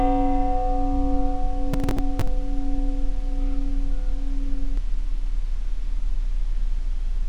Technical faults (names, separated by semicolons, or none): processor overload crackle